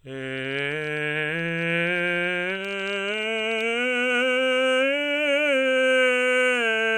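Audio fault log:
No technical fault can be heard anywhere in this music clip, and the signal holds steady and intact throughout.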